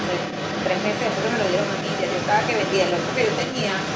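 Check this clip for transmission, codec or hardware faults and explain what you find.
One fault is present. The other side's voice leaking through runs throughout, a second voice only slightly quieter than the talker, likely from loudspeaker playback the echo canceller failed to remove. The call microphone processing limits the audio to below 8 kHz.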